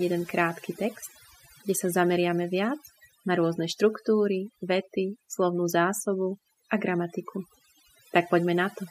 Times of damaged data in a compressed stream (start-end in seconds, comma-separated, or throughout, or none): none